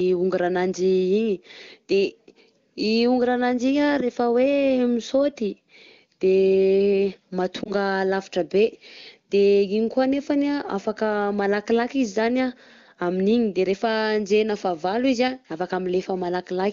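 Between 7.63 and 7.72 s the speech briefly dips and wavers, the sign of lost AMR speech frames. A radio error corrupted the data, and the decoder filled the hole by repeating its last good pitch and vocal tract settings at lower gain. The lost stretch fits a single 20 ms frame, so the sound never fades to silence and recovers within a fraction of a second. This is unlike a hard dropout or click: the gap is smoothed over, with no abrupt edge. The AMR-WB wideband coding around it sounds clean, consistent with a high bitrate.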